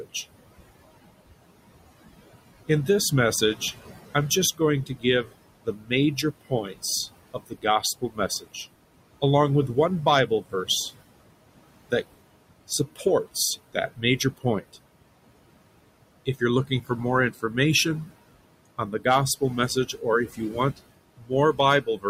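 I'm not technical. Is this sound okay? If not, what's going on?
No, not quite. There are two related problems, both caused by the noise suppressor, the part of the system that tries to clean up background hiss.

First, noise suppressor artifacts run through the whole clip. The suppressor pushes the room's background noise down hard, frame by frame, so in the gaps it drops away and then comes back up underneath whenever someone talks. The voice can come across a bit thin and watery.

Second, there's speech cut by the noise suppressor. At times the suppressor mistakes bits of the talking for noise and turns them down along with the background, so soft sounds and word endings go faint or get swallowed. It happens in short patches within these stretches: about 4.6 to 6.8 s, 7.3 to 8.6 s, 9.2 to 10.7 s, 12.7 to 13.1 s, 13.7 to 14.8 s, 16.3 to 18.1 s, and 18.8 to 22.1 s. The worst are around 4.6 to 6.8 s and 18.8 to 22.1 s, where it adds up to most of a second each time.

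The room noise itself isn't the problem. It's fairly quiet under the voice. The trouble is how aggressively it's being removed.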